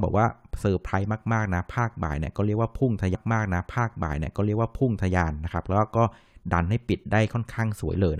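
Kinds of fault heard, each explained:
Stream segment repeated: at about 3.14 s the speech jumps back and a stretch of roughly 2.0 s plays a second time, running until about 5.13 s, with a small blip at the point where it doubles back. Nothing is lost, but the same passage is heard twice in a row. It comes from the player fetching or queuing one chunk of the stream twice, so that segment is handed to playback again before the stream moves on.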